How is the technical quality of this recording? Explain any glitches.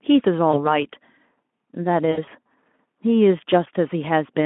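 The recording has two dropouts typical of VoIP packet loss concealed by the speech codec. It is narrowband Speex audio, limited to roughly 200 Hz to 3.4 kHz, with light codec roughness.

From 0.52 to 0.76 s, and again from 2.11 to 2.29 s, packets went missing. The decoder filled each gap by extrapolating its last pitch and filter while lowering the gain. The first gap covers about 20 ms of lost audio. The second totals about 80 ms, scattered over 160 ms with a longest run of 60 ms, which fits several lost 20 ms frames. Each gap sounds like a brief stretched buzzy tone or coloured noise that fades. The sound then stays weak or distorted for a short while after packets resume, because each decoded frame builds on the previous one.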